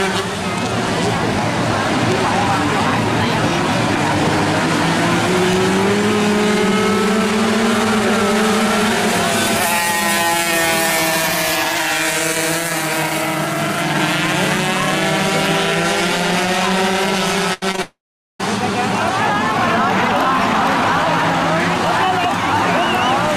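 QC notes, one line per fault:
17.53 to 17.64 s, burst of packet loss: about 80 ms never arrived, so the last sound stretches into a fading buzz or hiss, then jumps ahead.
17.72 to 17.80 s, short concealed packet loss, two back-to-back 20 ms gaps: the receiver patched each by extending the last sound, so it comes out as a quick smear.
17.82 to 18.41 s, long network dropout: the sound trails into a fading fill, then about 410 ms of silence. Likely nothing arrived for nearly 0.6 s, so that stretch is missing.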